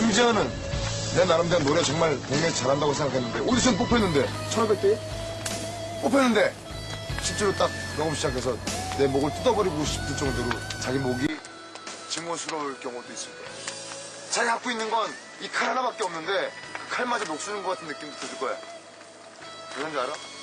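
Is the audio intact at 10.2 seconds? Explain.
Yes, the audio is intact at 10.2 seconds, with no dropout, click, distortion or other fault audible at that point.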